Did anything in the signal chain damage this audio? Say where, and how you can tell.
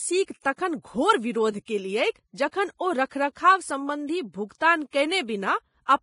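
Yes. The damage happened at the codec stage. The whole speech clip is band-limited, with nothing above 10.5 kHz. What remains of the treble sounds hissy and grainy, and the damage is heavy throughout. This points to Vorbis compression, likely at a low rate of around 27 kbps. At that quality the encoder lowers its cut-off and quantises the upper residue so coarsely that fine detail turns into noise of similar energy. Tones roughen and attacks blur.

The same codec causes a pre-echo between 4.91 and 4.93 s. A short hiss spreads about 27 ms ahead of a sharp onset, and the attack itself sounds softened. The transform spreads quantisation noise evenly across its block. The onset falls late in that block, so noise sized for the loud attack also fills the quiet gap before it.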